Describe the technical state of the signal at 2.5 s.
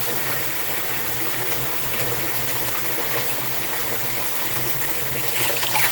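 At 2.5 s, as throughout the clip, USB bus current drawn in 125-microsecond microframes is leaking into the analogue path through power or ground. That USB whine sits as a steady, fixed-pitch tone at 8 kHz, roughly 25 dB below the sound, a thin high whistle laid over everything.

The sound there is also plainly rough and grainy, with a hoarse, muffled quality, most likely from Opus compression. The damage fits a low bitrate near 16 kbps, where the encoder has switched to its hybrid speech mode and fills bands with noise.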